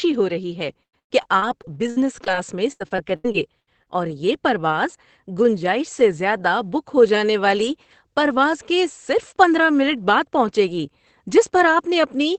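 A speech recording over a call link, where right after "ہو رہی ہے" the audio turns choppy and robotic from 0.73 to 2.35 s, then again from 2.72 to 3.88 s. That's repeated packet loss. Audio kept going missing in quick succession, with holes up to 110 ms and 80 ms. Each hole got papered over by stretching the last bit of sound, giving that choppy stutter. The top end stops around 8 kHz, which fits a low-rate Opus setting.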